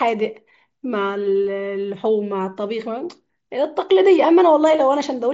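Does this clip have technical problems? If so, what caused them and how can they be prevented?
Yes: at 1.43 s there is concealed Bluetooth headset packet loss, a 15 ms gap the receiver patched by repeating a matching stretch of recent waveform. A spectrogram shows briefly smeared, repeated harmonics there. Keeping the phone close, with a clear radio path, prevents it.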